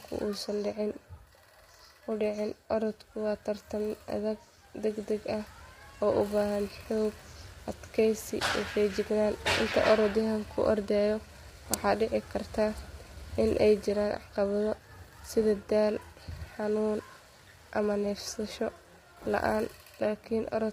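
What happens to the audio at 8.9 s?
Low-delay AAC compression affects 8.9 s as it does the whole clip. The speech there sounds rough and grainy, with a hiss-like noise between the voice's harmonics and a thin, synthetic-sounding top band. The likely cause is a low-delay codec such as AAC-ELD, whose very short frames cannot separate closely spaced pitch harmonics. At 8.9 s the heavy damage points to a low bitrate, around 24 kbps, too few bits to encode those harmonics cleanly.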